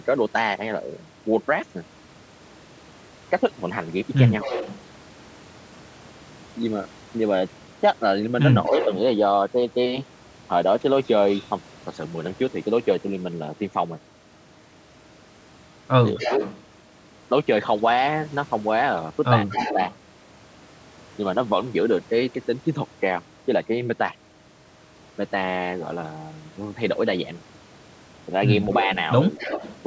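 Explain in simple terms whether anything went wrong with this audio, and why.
Yes, two things went wrong on this call, both likely caused by the other side using a loudspeaker.

First, an echo leak. The far end's echo canceller did not fully remove what its microphone picked up from its own loudspeaker, so the speech came back. A quieter copy trails about a quarter of a second behind at 4.41 to 4.81 s, 8.65 to 11.47 s, 16.18 to 19.96 s and 28.71 to 29.76 s.

Second, speech suppressed in double talk. When both sides spoke at once, the canceller could not tell the talker apart from the echo and turned everything down. The speech briefly dips at 8.68 to 8.81 s, 16.16 to 16.41 s and 19.51 to 19.78 s.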